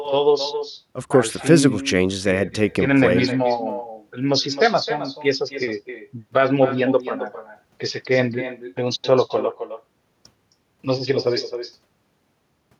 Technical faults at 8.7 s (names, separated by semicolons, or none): echo with no canceller